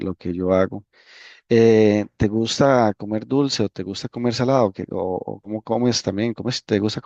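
At 5.43 to 5.51 s, compressed frames skipped: speech jumps ahead about 70 ms, fitting 10 ms frames, rather than leaving a silent gap.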